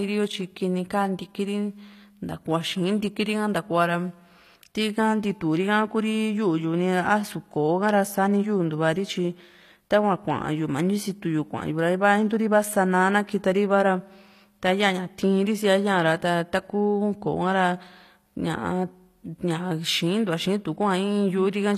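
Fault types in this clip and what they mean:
HE-AAC compression: throughout, s sounds turn gritty and lispy with nothing above 15 kHz, likely treble rebuilt by spectral band replication at around 24 kbps.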